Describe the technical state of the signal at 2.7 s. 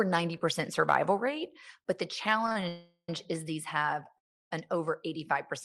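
At 2.7 s the sound has stopped moving forward. From 2.68 to 3.09 s the last fragment is held as a buzzing or hissing continuation that fades, ending in about 70 ms of silence before the audio resumes where it left off. This is a call audio freeze. Packets were likely held up in transit and the jitter buffer ran dry, so roughly 0.4 s was filled in. Nothing is lost, but everything after it now arrives 401 ms later.

Just before that, from 2.46 to 2.63 s, the sound catches and drags in short hiccups. These are repeated stalls (stutter). Packets kept arriving late, so the buffer emptied four times in that stretch, the longest gap being 31 ms. Each time, the receiver extended the last sound to cover the wait, about 77 ms in total, almost half of that span. None of the audio is missing; it is stretched and uneven.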